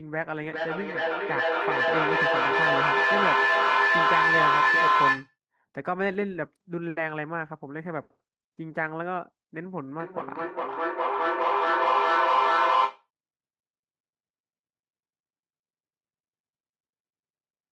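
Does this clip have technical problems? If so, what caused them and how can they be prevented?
Yes. Feedback howl from 0.4 to 5.38 s: two devices in one room loop sound, gaining level each pass, so a tone near 1 kHz swells to about 8 dB above speech, with the loop coming round about every 0.4 s. A spectrogram shows a bright line there. Keep one device unmuted per room.

Feedback echo between two devices from 10.0 to 13.1 s: one device replays the other's microphone, which picks it up again, so words return about every 0.4 s, peaking about 7 dB above speech. The waveform shows stacked copies. Use headphones or a single device.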